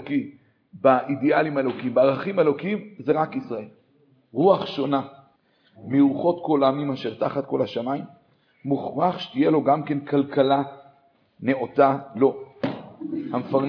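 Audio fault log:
No faults logged: nothing in the playback departs from the intended signal at any point.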